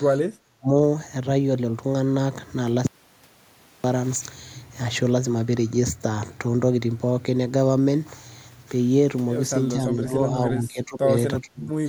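The speech dips sharply at 0.17 to 0.24 s (about 20 dB) and again at 0.45 to 0.73 s, where it sinks about 35 dB. This is speech suppressed in double talk, likely from an echo canceller that mistook the talker for loudspeaker echo while the far side spoke.

From 2.87 to 3.84 s the sound cuts to total silence for nearly a second, with no room tone beneath it. This is an audio dropout to silence, likely from a lost input, with silence written in its place.

The same double-talk suppression returns late in the clip. There is a slight dip at 9.73 to 10.34 s, then deeper cuts at 10.57 to 11.09 s (about 20 dB) and 11.41 to 11.74 s (about 30 dB).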